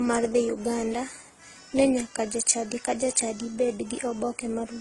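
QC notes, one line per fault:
Throughout: transcoding between lossy codecs. The speech carries two overlaid sets of coding artefacts: the smeared, band-limited texture of a low-rate speech codec, with the added artefacts of a second perceptual coder on top. Nothing is present above 11.5 kHz. The likely cause is an Opus encode at roughly 16 kbit/s re-encoded to AAC-LC near 32 kbit/s. The second coder spends its bits reproducing the first one's damage and cannot restore the lost detail.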